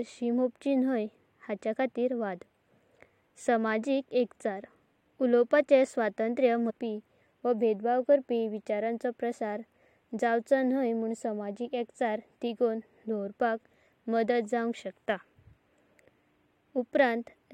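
At 6.69 to 6.71 s, right after "उलओवापाचे स्वतंत्र्य", the speech jumps forward with a short blip, so the flow breaks abruptly rather than pausing. This is a stream segment skipped. The likely cause is that one chunk of the segmented stream failed to arrive or load, and the player moved straight on to the next chunk. The stretch of programme carried by that chunk never plays, leaving a seam where the audio picks up later than it should.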